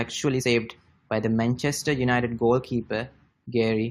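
At 0.41 s the speech is interrupted by a brief glitch caused by damaged data in the compressed stream. A short run of the encoded data is corrupt, so the decoder misreads those frames, loses sync and has to hunt for the next valid frame header before playback recovers. On a spectrogram this appears as a narrow vertical disturbance that breaks the speech harmonics, and the waveform shows a brief disruption unlike the surrounding signal.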